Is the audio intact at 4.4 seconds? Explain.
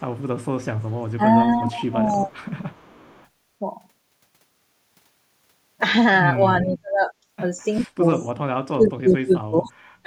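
Yes, at 4.4 seconds the speech plays through intact, with no dropout, click, distortion or other fault at that moment.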